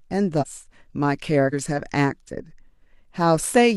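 Compressed frames skipped at 0.38 to 0.44 s and 1.49 to 1.54 s. The speech jumps ahead about 100 ms, then about 150 ms, which fits whole 46.4 ms frames lost or rejected by the decoder. Each join shows on the spectrogram as an abrupt break in the patterns.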